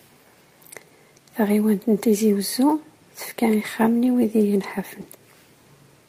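At 1.47 to 1.49 s, 4.05 to 4.07 s just before "i wid", and 5.01 to 5.03 s, a single 20 ms packet is a lost packet rebuilt from error correction. Each missing frame was replaced by the low-bitrate duplicate carried in the following packet, so the audio never drops out. Instead there is a brief coarse, noisy grain. Unlike concealment, which guesses the audio and leaves a smeared or buzzy fill, these repairs preserve the actual content, only at lower fidelity.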